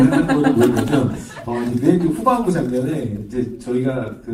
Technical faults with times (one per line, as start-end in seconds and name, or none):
none